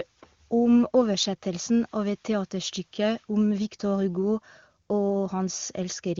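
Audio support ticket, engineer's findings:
Nothing to flag on this speech clip: it comes through the AMR wideband (HD Voice) codec path at 23.85 kbit/s, and I couldn't find anything worth raising a fault for.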